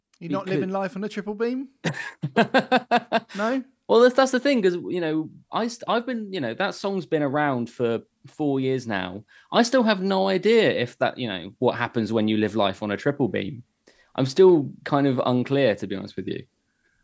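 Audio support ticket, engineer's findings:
Automatic gain rising, 0.18–9.01 s: speech and noise floor swell together, about 11 dB. AGC read input as too quiet, ramped gain slowly. Waveform envelope widens steadily; spectrogram brightens evenly across all bands, up to the call path's 8 kHz ceiling.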